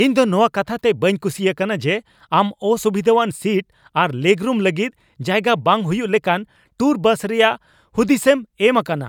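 No technical faults can be heard anywhere in the recording.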